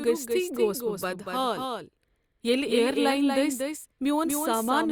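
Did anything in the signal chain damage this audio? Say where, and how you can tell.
Yes: a doubled audio track runs throughout the speech, from start to finish. A second full-band copy trails the original by roughly a fifth of a second, only a few decibels quieter, with no decay or room colouring, so it reads as a hard repeat rather than an echo. The stage is likely the capture or routing side, where a slower second path or a misaligned edit mixes the same signal in twice, out of step.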